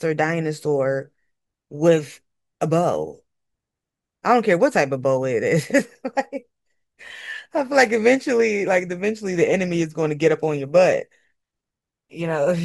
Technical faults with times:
7.57-12.64 periodic clock jitter

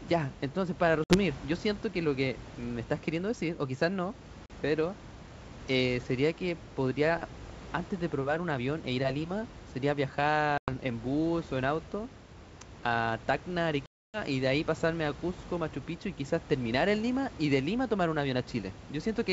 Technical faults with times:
1.04-1.17 packet loss on an ADPCM call
4.46-4.51 packet loss on an ADPCM call
10.58-10.70 packet loss on an ADPCM call
13.86-14.18 packet loss on an ADPCM call

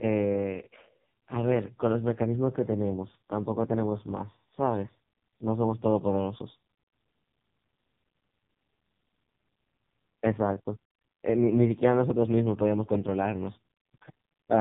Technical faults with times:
0.00-14.60 AMR narrowband mobile codec

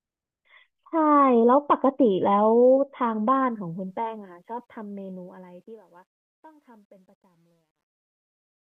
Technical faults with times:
3.51-8.78 truncation distortion on a fade

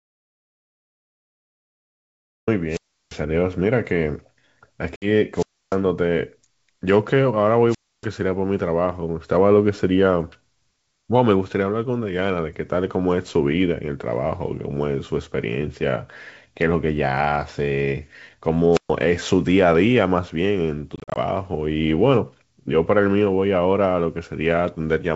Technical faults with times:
0.00-2.47 audio dropout to silence
2.69-3.16 wireless microphone squelch dropout
4.96-5.07 packet loss on an ADPCM call
5.34-5.77 wireless microphone squelch dropout
7.68-8.06 wireless microphone squelch dropout
18.72-18.91 wireless microphone squelch dropout
20.96-21.18 packet loss on an ADPCM call

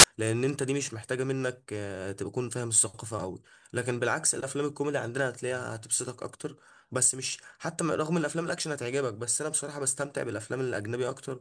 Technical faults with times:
0.00-0.04 file tags played as audio

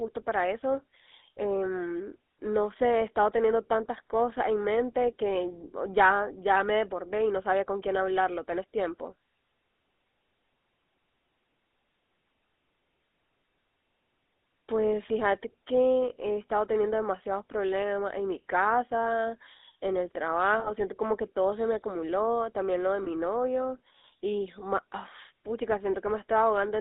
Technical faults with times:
0.00-26.80 GSM full-rate codec
20.60-20.70 lost GSM frames
23.04-23.08 lost GSM frames

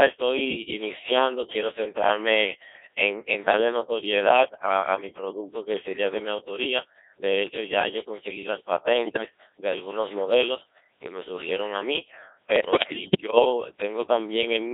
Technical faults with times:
0.00-14.73 Codec 2 vocoder
9.05-9.26 bit errors on digital voice radio
12.56-13.46 bit errors on digital voice radio

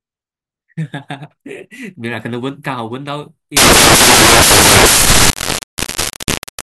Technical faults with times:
3.57-6.68 samples built from the wrong bytes

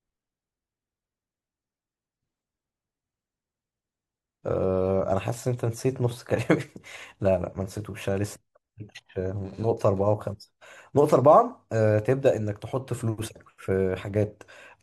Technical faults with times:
none

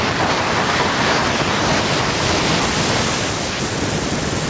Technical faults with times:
0.00-4.50 gain pumping

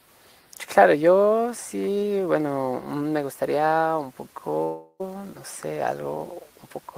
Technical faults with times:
4.63-5.02 long network dropout

